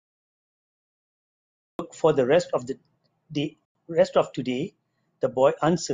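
For the first 1.79 s there is only digital silence, and then the speech enters abruptly in the middle of a sound at 1.79 s, with no natural attack or fade-in. This is a cut-off start: the recording or stream began late.

From 3.65 to 3.75 s the speech drops out into a hard-edged hole of silence lasting 100 ms. This is a gap between chunks. The audio was handled in 2.0 s chunks, and silence was inserted at the join rather than sound being lost.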